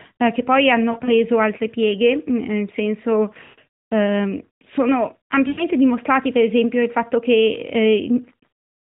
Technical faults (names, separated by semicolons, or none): lost AMR speech frames